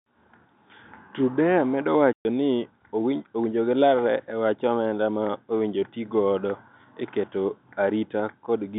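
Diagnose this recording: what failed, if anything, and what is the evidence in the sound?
At 2.13 s the speech drops out abruptly into dead silence and returns at 2.25 s, with hard edges where the waveform is cut and restarted. This is packet loss filled with silence in the network stage. A 120 ms run of packets never arrived, which fits twelve 10 ms packets, and the receiver played zeros instead of concealing the gap. The narrow telephone band of the G.711 coding continues unbroken on either side of the hole.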